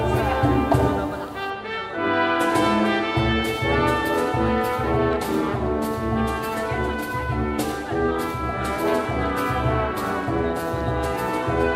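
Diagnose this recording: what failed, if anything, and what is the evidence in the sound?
A steady, even hiss sits under the sound from the very start to 1.5 s, with no crackle, grit or distortion riding on the signal. The noise floor is high, roughly 30 dB below the signal. This points to low bit depth with dither at a sample-format conversion stage. The audio was reduced to about 8 bits, and dither was added before rounding, so the quantisation error became constant white noise instead of signal-dependent distortion.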